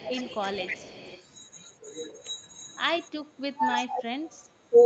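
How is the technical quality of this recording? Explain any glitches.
The recording has two kinds of call-processing glitches, each occurring twice. The audio tops out around 8 kHz, consistent with an Opus call path.

Echo leak appears from 0.00 to 1.23 s. A faint delayed copy of the speech trails it by 314 ms, sitting about 20 dB down. A loudspeaker echo likely slipped past the far end's canceller. A much fainter scrap, about 40 dB down, returns at 4.25 to 4.29 s.

Speech suppressed in double talk occurs from 3.45 to 4.09 s. The speech dips in pieces, by about 25 dB at worst, over roughly half a second. The canceller likely mistook overlapping talk for echo and ducked it. A brief dip of about 15 dB follows at 4.70 to 4.75 s.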